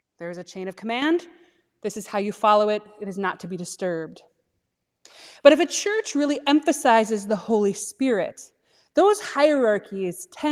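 Microphone volume stepped up at 1.02 s, after "is a chain of": input gain rose in one step, lifting voice and background by about 7 dB.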